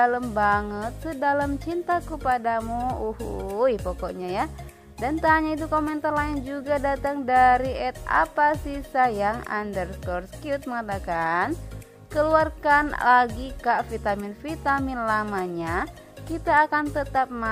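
Nothing technically wrong can be heard in this audio.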